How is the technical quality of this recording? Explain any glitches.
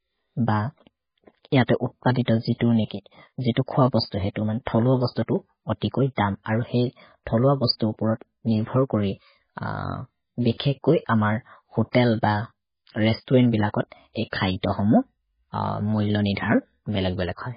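The technical quality is poor: heavy, lossy-coding damage runs through the whole recording.

Throughout, the speech sounds watery and swirly, with chirpy, metallic s sounds, smeared consonant onsets, and nothing above 5 kHz. The likely cause is MP3 compression at a very low bitrate, which fits roughly 16 kbps. Starved of bits, the encoder chops off the treble and zeroes weaker frequency lines, which flicker on and off between frames. A spectrogram would show a hard ceiling at 5 kHz and patchy, blocky holes below it.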